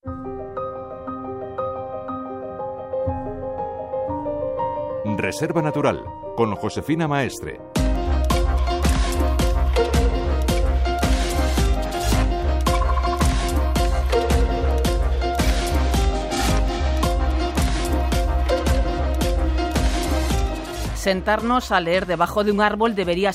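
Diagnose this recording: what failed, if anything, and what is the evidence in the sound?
Nothing failed; no stage leaves any audible trace.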